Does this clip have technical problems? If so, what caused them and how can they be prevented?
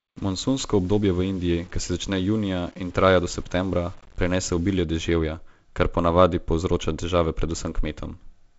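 Yes. From 0.0 to 4.76 s the speech turns grainy, with distortion following the sound, roughly 30 dB below it. The likely cause is low bit depth without dither, rounding consistent with 8 bits. To prevent it, keep a higher bit depth and add dither when reducing it.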